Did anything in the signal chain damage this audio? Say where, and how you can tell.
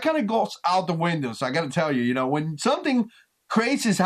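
No, nothing in the signal chain damaged this audio.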